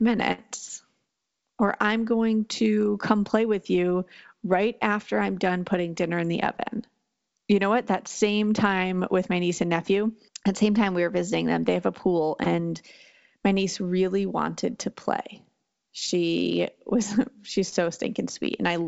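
At 0.32 to 0.40 s, a burst of packet loss: roughly 60 ms of concealment continues and fades the last sound, then playback resumes with about 60 ms skipped. At 5.49 s, a single sharp click is heard, likely from dropped samples, with the waveform jumping across what amounts to a single missing sample. At 12.44 s and 17.70 s, short concealed packet loss produces brief smears where the receiver extrapolated the preceding sound for a few hundredths of a second before blending back. Throughout, the band-limited sound with nothing above 8 kHz points to a wideband call codec such as G.722.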